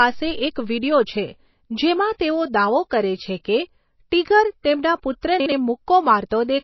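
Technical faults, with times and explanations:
Throughout, MP3 compression: the speech is band-limited with nothing above 5.8 kHz, and the codec damage is plainly audible as a watery, swirling texture. The likely cause is MP3 encoding at a low bitrate, consistent with about 24 kbps. With so few bits, the encoder discards weak frequency lines, which drop in and out from frame to frame, and it applies a fixed treble cut-off. Consonant attacks also lose their sharpness and smear.
5.40 to 5.52 s, chunks out of order: right after "છે કે 'ટિગર' તેમના", a 60 ms chunk plays one chunk late, so it lands after the 60 ms chunk that should have followed it. No audio is missing, but the two pieces are swapped, which creates three hard joins across 0.12 s. The sound at that point comes out briefly jumbled, as if it stepped back in time and then skipped forward.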